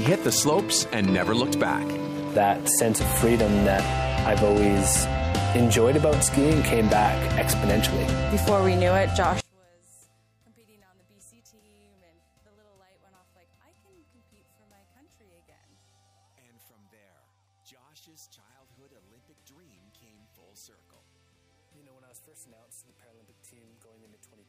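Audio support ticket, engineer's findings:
From 9.40 s to end: summed output drops by about 38 dB, centred content nearly gone, only a faint residue left. Likely one channel inverted upstream; reversed polarity cancels shared left/right content in the mono sum.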